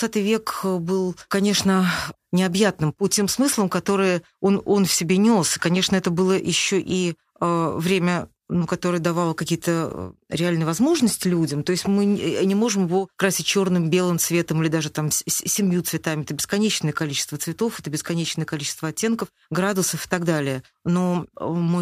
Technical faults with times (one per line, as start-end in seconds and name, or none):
0.17-21.73 clock slip clicks